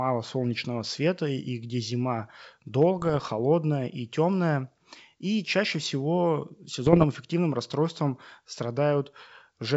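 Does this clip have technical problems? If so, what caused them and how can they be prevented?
Yes. Between 2.99 and 3.33 s, and again from 6.87 to 7.05 s, the speech breaks into pops and a rough, gritty burst with brief jumps in level. These are bit errors on an ADPCM link. Each flipped bit throws off the decoder's step size and predictor, so the damage rings on for milliseconds. The rate is around half a percent in the first burst and slightly higher in the second. The wideband G.722 coding around these bursts sounds clean up to about 7 kHz. Stronger channel error protection or concealment on the radio or transmission link would prevent this.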